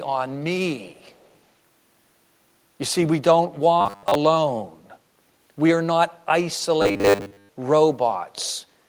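From 0.89 to 1.37 s there is an echo leak, likely from a far-end loudspeaker whose echo canceller let part of the returned signal through. A copy of the speech comes back about 396 ms late, very faint, around 35 dB below the direct sound. It comes across as a delayed ghost trailing the speech.

From 3.81 to 4.15 s and again from 6.82 to 7.49 s, there is robotic sound from repeated short buffers. Audio was likely arriving too seldom, so playback kept looping the most recent 10 ms slice, which fits a 10 ms buffer, while most of the real audio in those stretches was skipped. The constant looping imposes a fixed 100 Hz buzz, and the speech turns into a rigid metallic drone that only loosely tracks its original contour.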